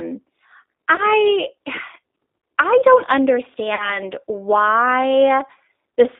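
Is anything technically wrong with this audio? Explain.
Yes. There are two problems: the whole clip has been through the G.729 codec, and at two points the VoIP packet loss was concealed by the speech codec.

Throughout, the speech was encoded by a low-rate G.729 codec, consistent with G.729A at 8 kbit/s. This codec does not send the waveform. It sends a vocal tract filter, a pitch predictor and a few excitation pulses per frame, and the decoder resynthesises the voice from those. The line band runs only from 250 Hz to 3.7 kHz. As a result, the voice sounds thin and boxy, and the damage is plainly audible as a rough, slightly synthetic texture.

From 0.96 to 1.02 s, and again from 3.75 to 4.0 s, VoIP packet loss was concealed by the speech codec. About 20 ms of audio went missing the first time, which fits one lost packet. About 40 ms went missing the second time, which fits two. The decoder filled each gap by repeating its last pitch and filter settings at falling gain, so the speech smears into a brief buzzy tone or coloured noise that fades. 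Because each frame depends on the one before, the second, longer dropout leaves the voice weak or distorted for a while after audio resumes.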